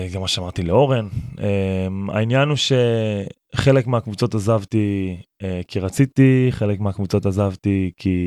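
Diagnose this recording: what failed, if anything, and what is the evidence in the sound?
Nothing failed here: no stage of the chain leaves any audible trace in this speech recording.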